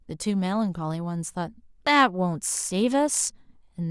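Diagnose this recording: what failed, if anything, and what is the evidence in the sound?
Nothing failed in this recording, and the sound offers no evidence of a fault at any stage.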